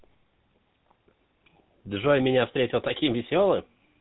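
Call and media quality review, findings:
Buzzy, gravelly roughness on the speech, throughout; nothing above 4 kHz. GSM full-rate codec: vocal-tract model driven by regular pulses, excitation kept at every third sample, so fine detail turns to buzz. Damage plainly audible, fits 13 kbps.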